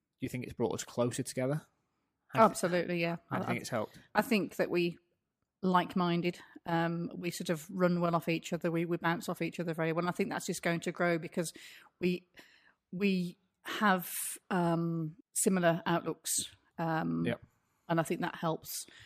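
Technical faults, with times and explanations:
0.11–19.03 s, clock slip clicks: a faint, evenly spaced ticking at about ten per second, a couple of hundred ticks in all, riding on the speech and vanishing in pauses. The likely cause is two unsynchronised clocks differing by around 200 ppm, so one sample is dropped or repeated each time the offset adds up to a whole sample. A spectrogram shows thin, regularly spaced vertical streaks through loud voiced stretches, and the waveform shows a tiny step at each slip.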